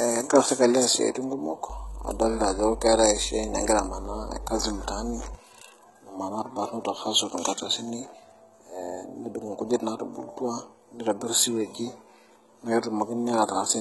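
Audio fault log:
throughout, HE-AAC compression: The speech was likely squeezed through HE-AAC at a very low rate, which fits roughly 16 kbps. Only the lower band is truly coded, and the treble is rebuilt from copied lower bands, so s sounds come out heavily gritty, metallic and lispy.
1.70 to 5.35 s, mains hum: The 50 Hz power line leaked into the signal path, as a ground loop or nearby transformer would cause. A steady low drone with some low harmonics sits under the speech, only about 10 dB below it, then stops.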